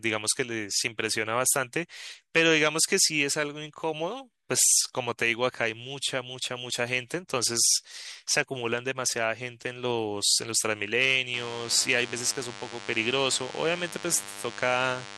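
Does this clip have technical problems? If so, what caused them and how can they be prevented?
Yes. From 11.34 s to the end, there is DECT cordless phone buzz. A nearby DECT handset or base sends a radio burst every 10 ms, and the audio circuitry rectifies it into a thin, steady 100 Hz buzz with many harmonics, roughly 15 dB below the speech. Keeping DECT phones and bases away from microphones, cables and interfaces prevents it.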